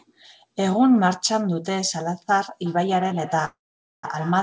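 From 2.66 s to the end, each stretch of speech returns roughly every third of a second as a thinner, ringing copy, peaking about 15 dB below the speech. This is feedback echo between two devices: one device plays another's call audio into a nearby microphone, which that device's echo canceller cannot remove.

From 3.45 to 4.06 s a call audio freeze holds the sound for 583 ms, about 480 ms of it silent, then resumes where it stopped, so nothing is missing. The likely cause is delayed packets emptying the jitter buffer.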